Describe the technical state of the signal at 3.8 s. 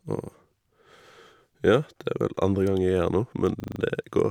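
At 3.8 s a system hang loop is just ending: the driver froze from 3.6 s and the hardware replayed one 40 ms buffer five times, producing a rapid 25 Hz stutter.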